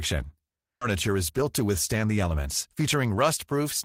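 At 0.81 to 0.83 s there is a skip ahead: roughly 0.7 s of speech was thrown away while later audio was already queued, so playback leaps forward with no silence or filler at the join. Unlike a dropout, which leaves an audible hole or a concealment smear, this sounds like an abrupt splice: the two sides of the cut sit directly against each other, and a chunk of the utterance simply never arrives.

From 0.95 s to about 3.6 s comes a jitter buffer speed-up. The receiver was holding more audio than it wanted and shed the excess by snipping out short pitch-period-sized slices again and again, running the speech at 110% and removing around 0.3 s in total. The talker sounds rushed, but the pitch stays put, which separates it from a resampling or clock error, where faster playback would also raise the pitch.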